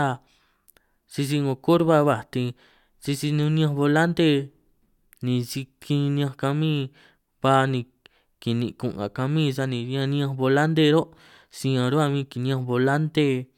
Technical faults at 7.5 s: none

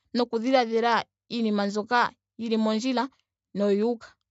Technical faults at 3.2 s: none

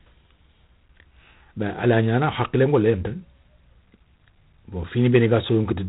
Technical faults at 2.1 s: G.726 ADPCM

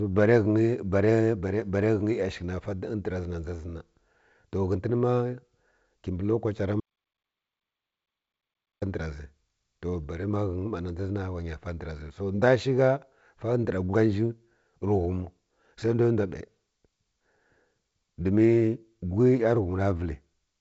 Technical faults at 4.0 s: none

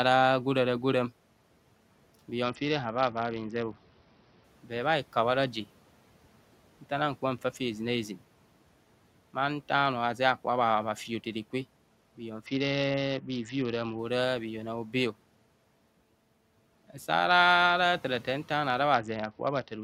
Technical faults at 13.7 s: Bluetooth SBC bit pool drop

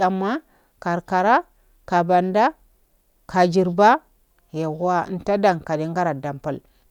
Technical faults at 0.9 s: none

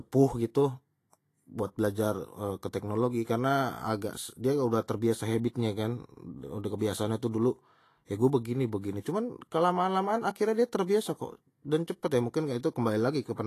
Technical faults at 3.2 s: Vorbis compression; pre-echo

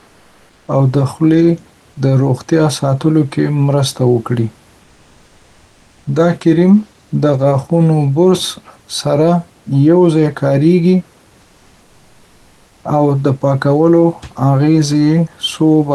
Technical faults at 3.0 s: none

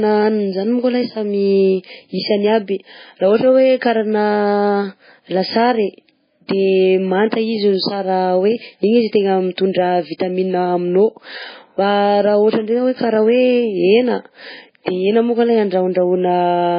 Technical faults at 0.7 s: MP3 compression

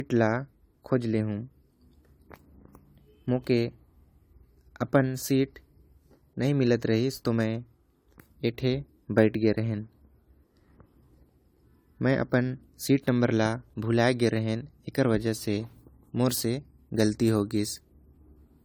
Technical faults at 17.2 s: generation loss

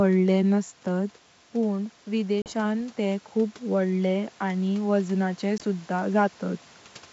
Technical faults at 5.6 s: packet loss on an ADPCM call

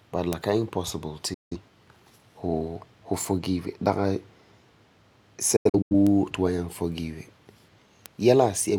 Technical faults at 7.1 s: none

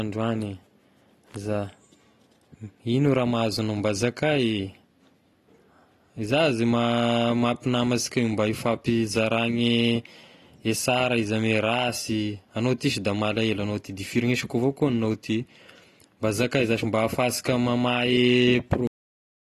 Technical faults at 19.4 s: AAC compression; cut-off end

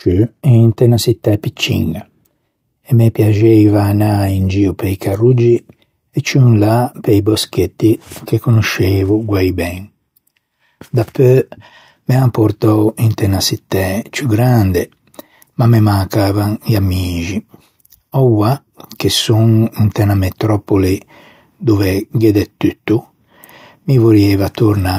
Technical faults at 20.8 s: none

